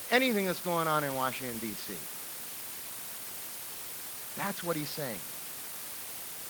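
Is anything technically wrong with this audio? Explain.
Yes. The speech is affected by low bit depth with dither for its whole length. The sound uses only about 5 bits. Random dither is added before each sample is rounded to those few levels. This turns the rounding error into steady white noise rather than distortion. The result is a constant, even hiss under the speech. It sits only around 10 dB below the speech, so it is very prominent.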